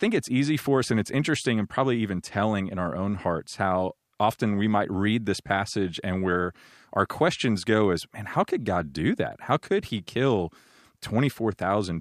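No technical faults can be heard anywhere in this recording.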